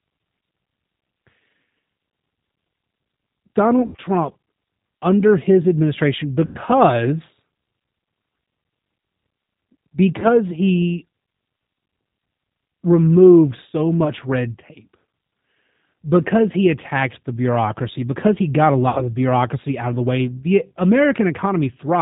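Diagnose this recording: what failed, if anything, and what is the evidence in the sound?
G.729 codec damage runs through the whole speech recording, at the codec stage. The band stops near 4 kHz, and the voice has the rough, slightly synthetic texture of speech rebuilt from a vocal tract filter, a pitch predictor and a few pulses per 5 ms subframe. The damage is plainly audible and fits the 8 kbit/s G.729A variant, which sends model parameters rather than the waveform itself.

VoIP packet loss concealed by the speech codec occurs at the network stage, with five gaps at 3.82–4.01 s, 6.45–6.57 s, 10.20–10.28 s, 14.04–14.11 s and 18.89–19.06 s. About 120 ms went missing in scattered pieces over 160 ms at 3.82 s, with the longest run 80 ms. The other gaps are 100, 20, 20 and 80 ms, which fits lost 20 ms packets. The decoder stretched its last pitch and filter into a fading buzzy tone or coloured noise. 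Because each frame builds on the one before, the voice stays weak for a moment after each gap.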